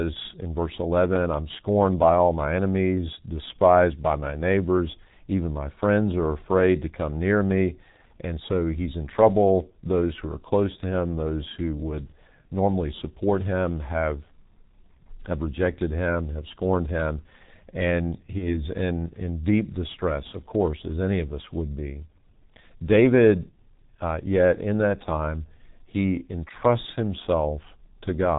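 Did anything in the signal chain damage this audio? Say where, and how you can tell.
Yes. Throughout, the speech sounds muffled and hoarse, with smeared consonants and nothing above 4 kHz. This is heavy codec damage from G.723.1 at 6.3 kbit/s.

From 18.38 to 18.65 s, the voice is stretched, fades, then recovers weakly. This is VoIP packet loss concealed by the speech codec. The decoder extrapolated one lost 30 ms frame, and the disturbance persisted afterward.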